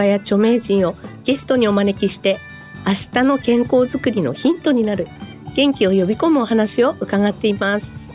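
No technical faults are audible.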